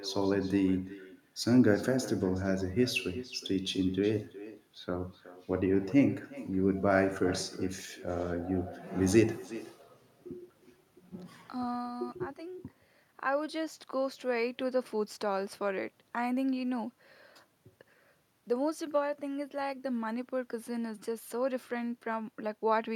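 From the very start and right through to the end, every phrase is trailed by its own ghost. That's echo with no canceller: the far end is playing the call out of a loudspeaker, their mic is catching it, and nothing's stripping it out, so the talker's own speech rides back across the network. The copy arrives about 0.4 s late, sitting about 16 dB down, and it sounds thin.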